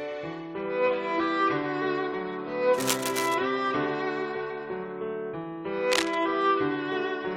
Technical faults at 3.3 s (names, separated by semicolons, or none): cable scratch noise